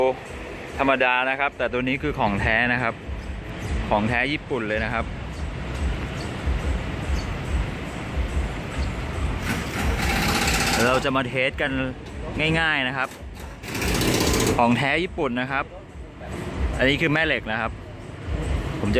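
No technical faults are audible.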